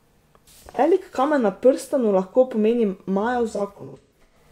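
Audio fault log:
0.72–0.79 s: AAC frame loss with concealment. About 43 ms, which fits a single lost frame, is rebuilt from the previous spectrum, leaving a brief smeared, phasey patch rather than a dropout's silent gap.
3.49–4.36 s: AAC frame loss with concealment. 384 ms of losses are scattered across about 770 ms, with the longest run roughly 150 ms. The concealment decays, so sound fades away and back instead of cutting abruptly.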